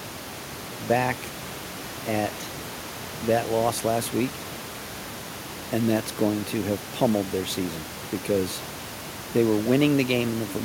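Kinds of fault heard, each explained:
No system fault can be heard in this speech signal, and the room's background sound, sitting about 12 to 24 dB below the speech, belongs to the recording itself rather than to any failure.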